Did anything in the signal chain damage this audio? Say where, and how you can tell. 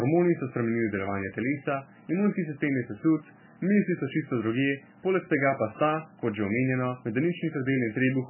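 Yes, at the codec stage, throughout the speech: nothing survives above 3 kHz, and the remaining sound is heavily watery and swirling, with smeared attacks. That flickering sets it apart from a plain low-pass filter and points to likely MP3 compression, starved near 9 kbps.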